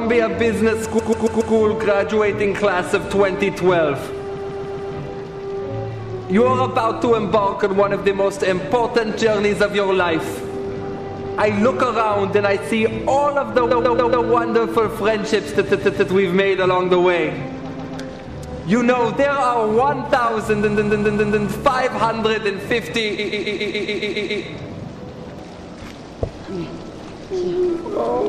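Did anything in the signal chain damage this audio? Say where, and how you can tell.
Yes. Repeated frames damaged it at the codec or storage stage. The same 139.3 ms block plays over and over at 0.98–1.53, 4.37–4.93, 13.70–14.26, 15.65–16.07, 17.70–17.97, 20.62–21.46 and 23.18–24.43 s. Each run is a stutter. Extra plays range from two to nine. The block length fits a run of about six compressed frames. The duplicates stretch the audio, by 1.25 s in the last run.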